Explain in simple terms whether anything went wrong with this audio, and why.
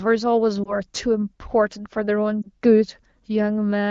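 Two short glitches at 0.64 to 0.74 s and 2.42 to 2.47 s are lost AMR speech frames. Each brief dip or warble fits a single corrupted frame that the HD Voice decoder covered by repeating its last good speech settings at reduced strength.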